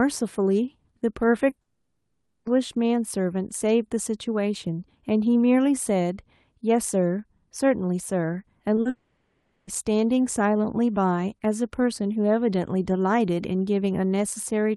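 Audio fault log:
1.49–1.57 s, 8.75–8.79 s and 8.81–8.87 s, short concealed packet loss: three brief holes of 20 to 40 ms (the first spans two 20 ms losses back to back) where the receiver carried the last sound forward and blended back in. Each is heard as a quick smear or wobble, not a gap, because the fill stays too short to decay into buzz or silence. Both runs lead straight into the longer dropouts that follow.
1.61–2.47 s and 8.89–9.69 s, long network dropout: about 0.84 s and then 0.78 s of audio never played, likely because packets stopped arriving for that stretch. Unlike the short losses, the concealment runs long enough to be heard thinning into a fading buzzy hiss, ending in about 30 ms of silence in the first case and cutting straight back to live sound in the second. Audio resumes further on, with that stretch simply missing.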